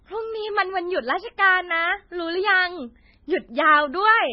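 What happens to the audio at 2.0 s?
At 2.0 s, as throughout, the speech shows likely heavy MP3 compression. Treble stops at 5.6 kHz. Bit-starved frequency lines flicker, sounding watery and swirly.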